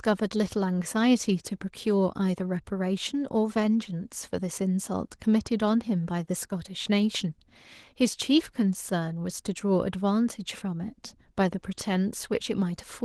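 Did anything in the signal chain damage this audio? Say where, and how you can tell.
Yes, at the codec stage: Opus voice compression at 16 kbps in hybrid mode codes the whole speech clip coarsely, leaving it plainly muffled, hoarse and faintly robotic.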